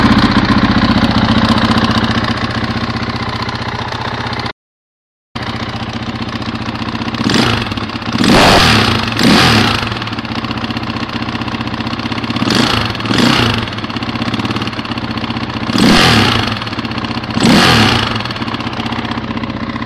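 At 4.51 s the sound cuts off abruptly and does not return until 5.35 s, an audio dropout to silence lasting about 0.84 s. The gap is silence, with no room tone or noise floor underneath, so the signal path itself stopped delivering audio rather than the source going quiet. The likely cause is a momentary loss of the input, such as a disconnect, link failure or mute, while recording continued writing silence. Whatever occurred during that interval is missing.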